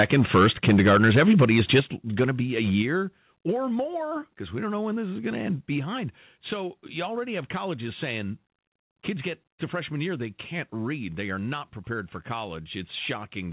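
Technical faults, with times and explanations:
0.0 to 1.8 s, microphone overload: peaks run about 9 dB past full scale, and roughly 7 percent of samples are flattened. This is likely from excessive input gain, and it gives the loudest syllables a harsh, crackling edge.
0.02, 1.8, 2.82 and 3.84 s, microphone volume stepped down: level drops abruptly by about 2, 7, 4 and 2 dB, likely because the call software cut input gain after detecting clipping.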